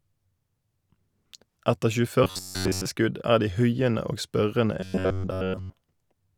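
A speech clip in which the voice twice collapses into a rigid, metallic drone: from 2.24 to 2.86 s, just before "skudd er de huiende", and from 4.80 to 5.73 s, right after "de huiende og spørrende". This is robotic sound from repeated short buffers, likely caused by audio arriving too slowly, so a fragment of about 10.7 ms is looped in place of the missing material. That loop imposes a fixed buzz at 93.8 Hz. The first stretch is entirely made of repeats and the second mostly so. On a waveform the sections show an identical short cycle repeating. A spectrogram shows evenly spaced horizontal harmonics locked to 93.8 Hz.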